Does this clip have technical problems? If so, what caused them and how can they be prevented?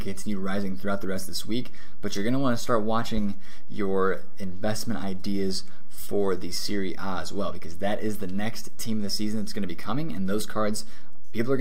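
Yes. A DC offset of about -20 dBFS runs through the whole clip, shifting the waveform off zero by a constant amount. It is inaudible as such but eats headroom and sits as steady energy at 0 Hz. Prevent it with a high-pass or DC-blocking filter.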